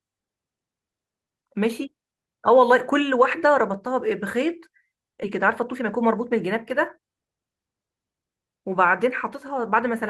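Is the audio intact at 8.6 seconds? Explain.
Yes, the speech at 8.6 seconds plays through intact, with no dropout, click, distortion or other fault at that moment.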